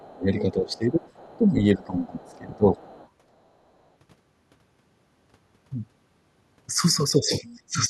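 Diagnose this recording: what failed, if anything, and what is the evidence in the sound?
The call processing stage, most likely the echo canceller, failed under double talk. It treated the talker as echo and pulled the speech down across 0.00 to 1.05 s, 1.37 to 2.78 s and 7.18 to 7.90 s, with drops of roughly 25, 15 and 20 dB at their deepest.

The same echo canceller also left residual echo behind, so the other side's voice leaks through. It is heard at 0.39 to 1.37 s, 2.04 to 2.37 s and 2.78 to 3.09 s, faint, around 30 dB below the main speech, as the loudspeaker signal was likely never fully subtracted.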